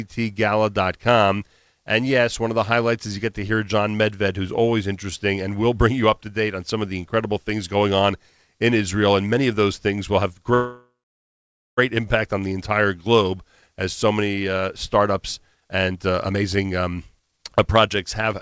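After "those things will have", from 10.54 to 11.79 s, the sound stretches into a fading buzz and about 0.87 s of silence, then resumes at "impact on the entire" with nothing lost, likely a call audio freeze from delayed packets draining the jitter buffer. From 14.98 to 18.34 s, just after "as so many uh", a jitter buffer speed-up trims pitch periods repeatedly, running speech at 130% with unchanged pitch, removing about a second.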